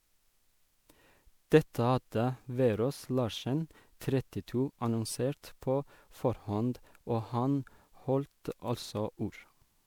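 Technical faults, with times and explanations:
Throughout, generation loss: the speech sounds swirly, hollow and smeared, with blurred consonant attacks, worse than one MP3 pass at 128 kbit/s would leave. This likely comes from around seven re-encodings, each adding fresh quantisation noise and spectral holes on a shifted frame grid.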